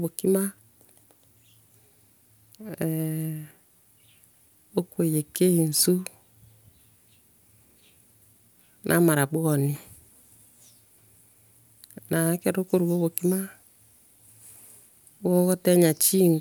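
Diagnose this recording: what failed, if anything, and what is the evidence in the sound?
Nothing in this speech recording points to a failure at any stage of the chain. No event in the sound stands out as evidence of a fault, so there is nothing to locate or trace to a mechanism.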